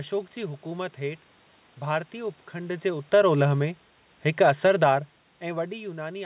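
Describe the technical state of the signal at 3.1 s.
At 3.1 s the signal sits inside an automatic gain falling event that runs from 2.99 to 4.88 s, starting just after "हेठ भारतीय उपखंड जे". The gain control judged the input too loud or its background noise too strong and eased its gain down by about 5 dB over those two seconds, so the speech and the room background sink together. On a waveform the envelope tapers steadily across the span; a spectrogram shows every band dimming evenly, with no change in its shape.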